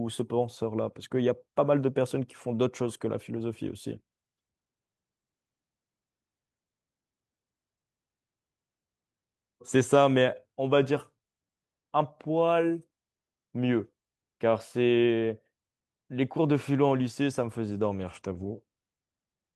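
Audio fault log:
No faults are heard in this speech recording. There is nothing to log at any point in it.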